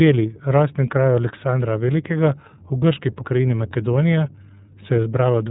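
The speech sounds thin, muffled and slightly rough and synthetic from start to finish, with nothing above 4 kHz. That plainly audible damage is the iLBC codec: narrowband coding of each frame independently, with a grain that fits its 13.33 kbps mode and 30 ms frames.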